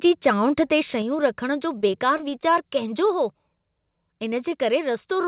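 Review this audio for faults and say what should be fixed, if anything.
Microphone overload, 0.26 to 0.28 s: the input gain was most likely set too high, so the loudest peak ran about 2 dB past the converter's ceiling and roughly 3 percent of the samples in that instant had their tops sheared flat. To the ear this is a brief harsh crackle riding on that syllable rather than a clean peak. Lowering the microphone's input gain at the source, leaving several dB of headroom, prevents it.

Microphone volume stepped down, at 1.02 s and again at 3.06 s: the capture level was lowered in single jumps, likely by the call software's automatic gain control reacting to a hot signal. The first jump takes about 4 dB off, heard as a sudden drop in both the sound and the background just before "रखण जो". The second is a smaller dip of about 2 dB. Setting a sensible fixed input level, so the automatic control has no reason to intervene, keeps the level steady.

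Repeated packet loss (robotic sound), 1.73 to 2.57 s, starting right after "रखण जो": the network kept dropping or delaying audio, leaving about ten holes over this stretch. The receiver patched each one by extending the preceding sound, about 125 ms in total. That concealment covers some 15 percent of the stretch, and the longest single gap is 23 ms. The result is a choppy, robotic texture with fragments missing. The narrowband call path, with nothing above 4 kHz, which points to telephone-grade G.711 coding, does nothing to hide these gaps. A more stable connection, such as wired rather than congested wireless, or a larger jitter buffer, would reduce these dropouts.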